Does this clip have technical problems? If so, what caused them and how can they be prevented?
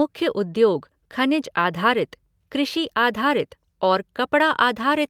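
No, there are no faults.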